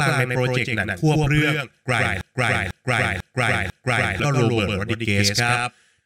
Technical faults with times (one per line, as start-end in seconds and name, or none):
0.00-6.06 doubled audio track
2.21-4.20 broken-record loop